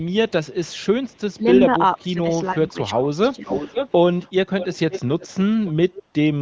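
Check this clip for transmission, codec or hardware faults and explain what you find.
Yes, there are two kinds of fault here, both pointing back at the far end's echo handling, while the speech rides on AMR-WB (HD Voice) at what sounds like 18.25 kbit/s.

Echo leak, 0.03 to 1.35 s, 3.46 to 5.28 s and 5.65 to 6.03 s: a delayed copy of the speech trails behind, about 450 ms late at first, then 527 ms. It's barely there early on, nearly as loud as the speech in the middle stretch, and quieter again at the end. The likely cause is a speakerphone whose echo canceller let its pickup slip back to us.

Speech suppressed in double talk, 1.35 to 1.45 s and 1.76 to 3.49 s: the speech ducks, sharply at first, then in shallower dips totalling under a second. The likely cause is the canceller mistaking overlapping talk for echo and turning it down.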